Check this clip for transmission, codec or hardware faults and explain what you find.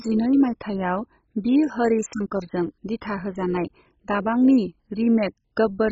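There is one fault, present from start to finish: heavy MP2 compression damage. The speech sounds dull and gurgling, with a granular roughness, and likely comes from MPEG Layer II encoding at a very low bitrate, consistent with about 16 kbps. Starved of bits, the codec switches off whole upper sub-bands and coarsely quantises the rest. On a spectrogram, nothing appears above 7.5 kHz, and the bands below flicker in blocky patches.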